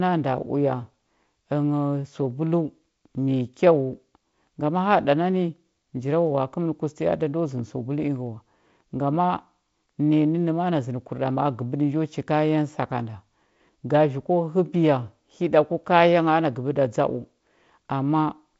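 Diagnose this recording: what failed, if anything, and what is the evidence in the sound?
Nothing in this speech recording points to a failure at any stage of the chain. The audio carries the signature of G.722 wideband telephone coding working as intended at 48 kbit/s, with content ending near 7.7 kHz and only a light coding texture over the sound.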